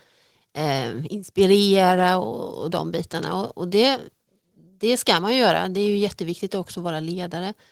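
At 2.25 s, right after "eh inspirera" and before "och de bitarna", the speech and the background behind it drop together by about 3 dB in a single step and stay at the lower level. This is a microphone volume stepped down, likely the call software cutting the device's input gain after judging it too hot. Unlike an automatic gain control ramp, which slides smoothly over a second or more, this change is instantaneous.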